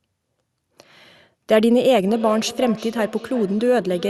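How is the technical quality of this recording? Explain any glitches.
The recording has one glitch, in its second half. The call codec's coding noise and a top end stopping near 12 kHz are audible throughout.

Feedback echo between two devices, from 2.04 s to the end: a second device replays the call and the first microphone picks it up again. The speech returns roughly every 0.4 s, thin and ringing, at about 15 dB below the speech.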